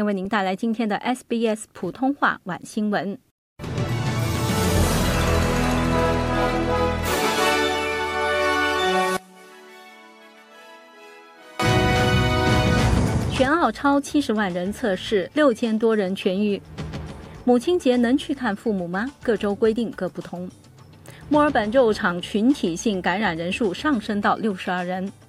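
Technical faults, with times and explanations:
9.17–11.60 s, one channel inverted: the sound suddenly drops by about 24 dB and goes faint, with the centre content largely gone. That's likely one stereo side flipped in polarity, so whatever both channels share cancels in the mono sum.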